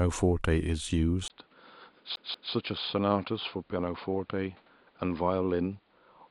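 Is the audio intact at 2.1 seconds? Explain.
No. At 2.1 seconds the sound is dull and boxy. Nothing reaches above 5 kHz, the level sits about 5 dB lower, and a new background noise lies roughly 35 dB under the signal. This began with a 20 ms silence at 1.28 s and lasts to the end of the clip. This is an input switched to a poorer device: the recording likely moved mid-take to a narrower-band microphone or headset profile, with its own tone, gain and noise floor.

Just after, from 2.16 to 2.53 s, the speech stutters quickly and evenly. The same 187 ms stretch plays twice, with a brief mute at each jump. That is the CD stuck on one turn: a scratch throws the laser back to the same spot on each revolution, so one short slice repeats like a skipping disc.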